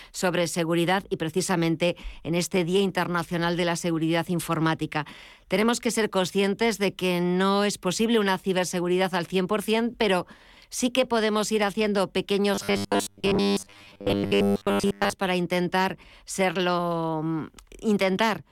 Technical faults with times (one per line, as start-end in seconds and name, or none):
12.55-15.13 robotic sound from repeated short buffers